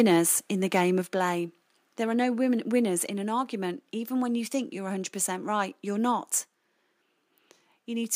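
A speech clip with microphone overload at the start. From 0.0 to 0.16 s, just before "in the", peaks run about 2 dB past the converter's limit. Their tops are flattened, and the syllables get a harsh, crackly edge. It returns from 0.75 to 0.81 s, right after "in the", now about 4 dB over, with a few percent of samples clipped. The likely cause is an input gain set too high, driving the converter into its ceiling. Then comes a microphone volume step-down. At 1.02 s the whole signal, voice and background together, drops by about 4 dB in one jump. A second step of about 2 dB lands at 3.06 s, between "no winners" and "in an argument". This is likely the call software's automatic gain control reacting to the clipped peaks and cutting the device input level in discrete steps.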